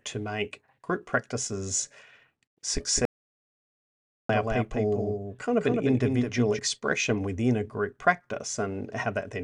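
At 2.85 s a doubled audio track begins and runs to 6.59 s. A second copy of the speech trails the original by around 200 ms, roughly 5 dB quieter. It has no reverb tail. It starts and stops abruptly. Two out-of-step copies in an edit are the likely cause.

From 3.05 s to 4.29 s comes an audio dropout to silence. About 1.24 s of sound is lost. The gap is dead silence, with no room tone. A briefly lost input, written on as silence, is the likely cause.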